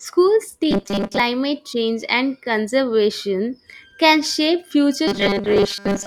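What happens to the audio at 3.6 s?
Nothing goes wrong at 3.6 s: the speech carries on intact through that moment, with no dropout, click, distortion or other fault to be heard.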